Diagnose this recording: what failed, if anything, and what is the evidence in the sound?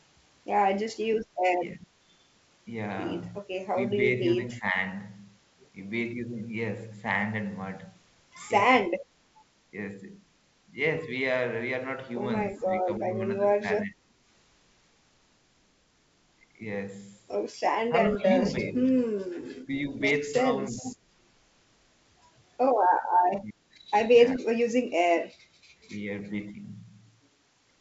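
Call processing failed during double talk: the echo canceller, likely unable to tell the near talker from loudspeaker echo, attenuated both, so this speech dips or breaks up at 1.44–1.96 s, 3.42–4.76 s, 12.54–14.16 s, 17.89–21.06 s and 23.41–24.72 s. The drops reach roughly 15 to 30 dB, deepest near 24 s. The affected stretches total from a few tenths of a second to about a second per event.

Call processing also shows an echo leak. The far end's canceller likely left residual loudspeaker pickup in its microphone signal and sent it back. A faint delayed copy of the speech, about 15 dB below it and lagging by 379 ms, surfaces briefly between 20.77 and 20.96 s, inside the suppressed passage there.

On the transmission link, bit errors on an ADPCM link hit the G.722 stream at 24.33–24.37 s. Flipped bits corrupt the decoder's step size and predictor state, so the damage rings on past the error itself. 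This gives a short rough burst with a pop and a brief level jump, consistent with a very low error rate striking a handful of frames. G.722 at 64 kbit/s carries clear wideband speech around it.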